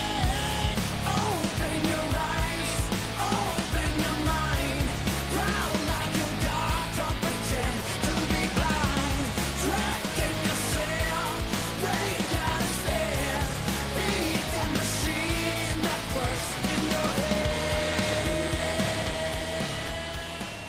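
Nothing goes wrong anywhere in this one, so there's no fault to point to at any moment.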